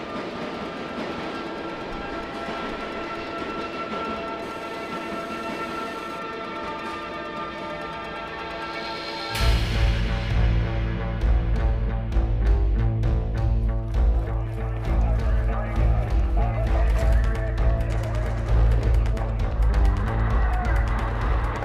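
GSM phone buzz runs from 4.42 to 6.19 s, a steady, raspy 216.7 Hz tone with many harmonics, about 25 dB below the audio. A nearby 2G phone on a call transmits radio bursts at that rate, and the audio circuitry rectifies them into sound.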